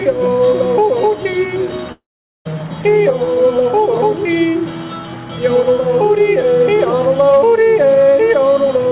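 From 1.92 to 2.47 s the sound breaks off, most likely a long network dropout. The receiver stretches the last sound into a fading buzz. About 440 ms of silence follows. Roughly 0.54 s of audio never returns. The band stops near 4 kHz, which fits G.711 A-law.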